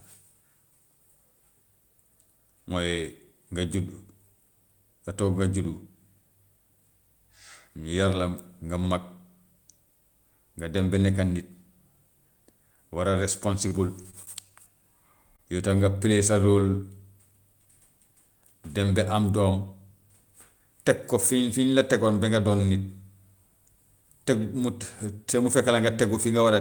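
Repeated packet loss (robotic sound) runs from 13.33 to 14.28 s. Over just under a second, the stream drops out six separate times, with the longest hole about 29 ms. Each time, the receiver patches the gap by stretching the last received sound forward. Roughly a tenth of that stretch is synthesized filler, so the speech turns choppy, with small pieces missing between the patches.

Short concealed packet loss follows at 15.36 to 15.40 s. About 20 ms of audio failed to arrive in time for decoding. The receiver covered most of the gap by continuing the preceding sound, voiced or noise-like as appropriate, before crossfading back into the real signal. What's heard is a single brief smear or wobble, short enough that a quick consonant could be lost inside it.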